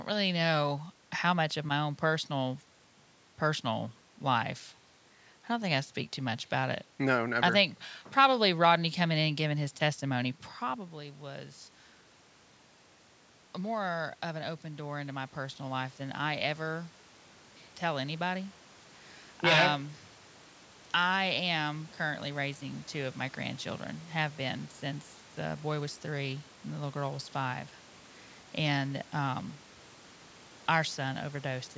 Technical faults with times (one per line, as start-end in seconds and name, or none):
13.66-16.98 automatic gain rising